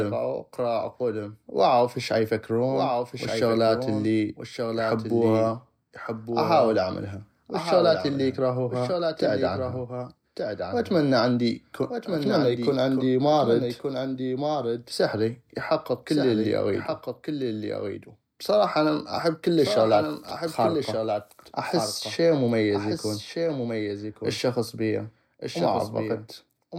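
Throughout the speech, every phrase returns about a second later as a second, somewhat quieter copy, roughly 5 dB down, full-band and dry, with no decay or room colour. This doubled audio track likely comes from the same signal being captured twice, once through a slower path.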